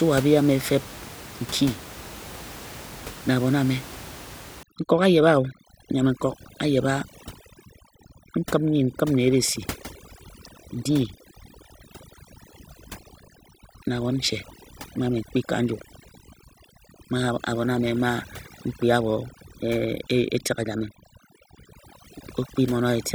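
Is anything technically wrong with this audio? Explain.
Yes. From 4.63 s to the end, overdone noise removal pushes bands near the estimated noise floor to silence, leaving twinkling specks, with speech above room noise about 17 dB down.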